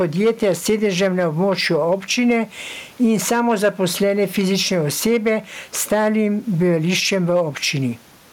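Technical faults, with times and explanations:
Throughout, gain pumping: the level breathes as the speech comes and goes. The room noise sits well below the speech, with the gain swinging by something like 10 dB. Loud and quiet passages sit unnaturally close together, giving a squashed, flattened delivery. The likely cause is input gain set far too high, with a fast limiter or compressor clamping down on each loud moment.
0.01 to 2.37 s, 3.12 to 3.68 s, 5.08 to 5.33 s, 5.92 to 6.24 s and 7.13 to 7.41 s, hard clipping: the loudest speech in these stretches crackles on the peaks. The signal overshoots what the stage can pass by about 3 to 5 dB, so the tops of the waveform are sliced flat. Those flat tops generate high harmonics, which is the crackly distortion heard on each loud stretch.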